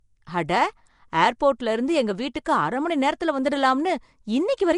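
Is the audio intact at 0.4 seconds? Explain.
No. At 0.4 seconds, as everywhere in this speech, there is a rough, hissy halo and a smeared, underwater quality, with nothing above 10.6 kHz. This is likely Nellymoser compression, consistent with a rate near 44 kbps. Coding 256-sample blocks on a tight fixed bit budget leaves weak bands without bits, so they are filled with noise. That noise-filled hiss sets it apart from low-bitrate MP3, whose damage is swirly, metallic warbling rather than grainy fizz.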